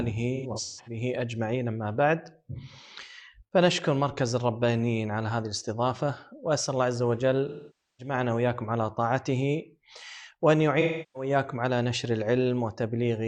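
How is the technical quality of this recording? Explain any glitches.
The recording has three glitches, all AAC frame loss with concealment: 0.35 to 0.97 s (about 341 ms lost in bursts, the longest run around 150 ms), 7.48 to 8.14 s (512 ms), and 10.80 to 11.29 s (341 ms). The decoder rebuilds missing frames from the last good spectrum, so the audio smears into a noisy, phasey wash. A hard dropout would instead cut abruptly to silence.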